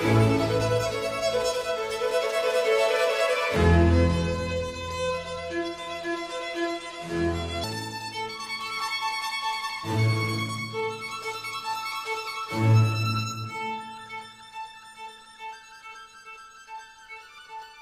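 A section at the wrong speed from 3.56 to 7.64 s, likely from that stretch being played against the wrong clock, runs at 0.768 times normal speed. Speed and pitch fall together, so the sound turns slow and deep, roughly five semitones lower.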